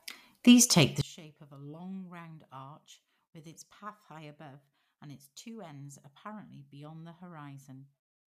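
Speech, and from 1.01 s, just after "take the", through to the end, the voice collapses by about 27 dB into a faint residue, with the centred body nearly gone. This is likely one channel inverted: with one side's polarity reversed, the content common to both channels cancels when summed to mono. Unlike a dropout, what remains isn't silence but a faint copy left from the difference between the channels.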